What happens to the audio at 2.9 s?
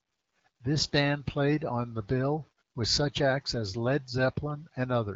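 Nothing goes wrong at 2.9 s: the speech there comes through intact, carried by the AMR wideband (HD Voice) codec at 12.65 kbit/s with its usual band limit near 7 kHz.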